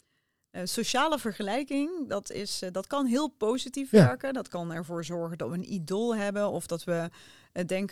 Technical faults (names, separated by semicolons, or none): CD scratch ticks